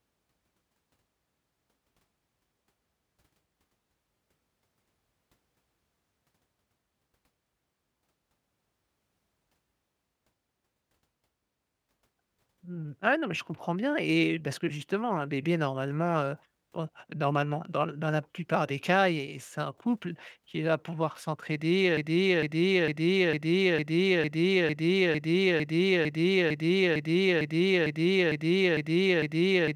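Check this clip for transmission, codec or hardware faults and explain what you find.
There's one fault here, a broken-record loop. Right after "qui va pouvoir s'entraider", at 21.97 s, a 0.45 s fragment repeats back to back, 17 times, to the very end. Something in the chain likely stalled and kept replaying its last buffer, so the real speech is gone.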